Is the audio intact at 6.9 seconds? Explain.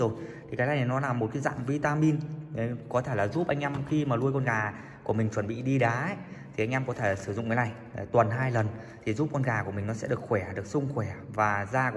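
Yes, the audio at 6.9 seconds is intact, with no dropout, click, distortion or other fault audible at that point.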